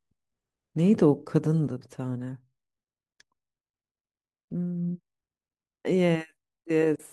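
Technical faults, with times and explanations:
1.68 s to end: sudden gain jump. The speech and its background noise drop together by about 6 dB in a single step and stay lower for the rest of the clip, likely a gain change or bit shift applied instantly without a ramp.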